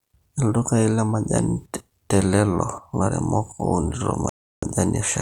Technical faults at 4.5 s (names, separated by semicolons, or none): rebuffering stall